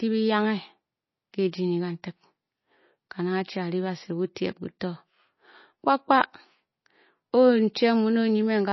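Across the whole speech clip the treble stops dead near 5.8 kHz, and the remaining sound has a watery, swirling quality, with s sounds turning chirpy and metallic and attacks smeared. This is likely MP3 compression at a starved rate, which fits something near 24 kbps. On a spectrogram the band above 5.8 kHz is empty, and below it, weak components flicker on and off in blocky patches from frame to frame.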